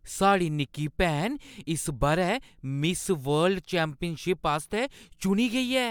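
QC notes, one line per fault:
No faults found in this speech recording. Nothing here needs a QC flag.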